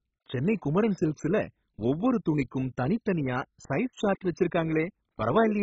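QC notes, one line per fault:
throughout: MP2 compression. The speech is dull, with nothing above 7.5 kHz and a gurgling, granular grit as upper sub-bands switch on and off under heavy coarse quantisation. This likely points to Layer II at about 16 kbps, unlike the smoother swirl of transform codecs.
3.08–3.84 s: CD scratch ticks. Just after "குமரன் சில்க்ஸ்ல ஒவ்வொரு துணிக்கும்", five short ticks, the longest only a few milliseconds, come at a steady rate of about six a second. Each marks damaged samples being patched once per disc turn, so the spacing is regular rather than random like dust clicks.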